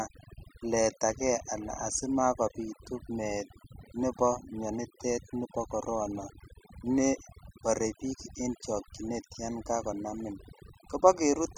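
Throughout, the speech sits over a near-silent background with twinkling specks: overdone noise removal, where aggressive reduction cut noise-level frequency bands and took quiet voice detail with them.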